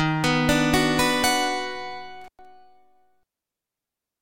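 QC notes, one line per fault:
2.21–2.45 s, intermittent contact: the signal drops out for about 107 ms with crackle at each edge, as a loose plug or cable briefly opens.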